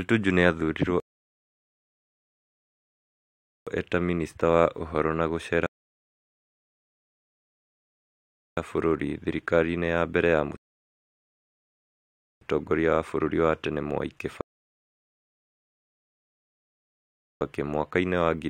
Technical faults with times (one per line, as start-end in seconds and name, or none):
1.00-3.67 rebuffering stall
5.66-8.57 rebuffering stall
10.57-12.41 rebuffering stall
14.41-17.41 rebuffering stall